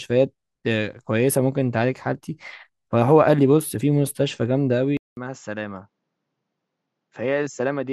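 At 4.97 s the speech cuts out for 200 ms, then returns duller and noticeably quieter until the end, with nothing above 7.6 kHz and a faint new background noise. This is likely an input switched to a poorer device mid-recording.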